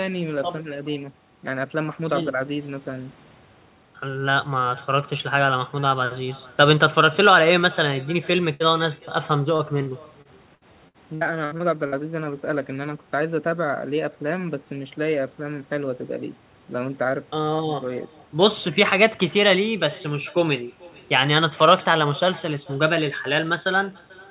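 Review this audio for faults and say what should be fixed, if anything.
Echo with no canceller runs through the whole clip: every phrase is followed by a quieter, thinner copy of itself, about 24 dB down and arriving roughly 0.4 s later. That spacing is the round trip of the talker's own audio, which reaches the far end, plays from a loudspeaker there, is picked up again by that end's microphone and comes back with nothing subtracting it. The band-limited sound, with nothing above 4 kHz, is consistent with a G.711 mu-law path at 64 kbps. Enabling acoustic echo cancellation at the far end, or having that side use a headset, would prevent this.

A burst of packet loss occurs at 8.54 to 8.63 s. About 60 ms of audio never arrived, and the receiver covered the hole by extending the last sound for about 59 ms and fading it down. The result is a brief held buzz or hiss, after which the audio picks up further along with that slice gone. 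A larger jitter buffer or a steadier network link would prevent this.

Repeated packet loss (robotic sound) spans 9.56 to 11.95 s. Over those 2.4 s there are 9 separate gaps, the longest 64 ms, totalling about 420 ms missing, and about 17 percent of the stretch is concealed audio. Each patch extends the previous sound, and the next gap follows soon after, so this stretch comes out choppy with pieces missing. Fixing the underlying network congestion or adding forward error correction would prevent this.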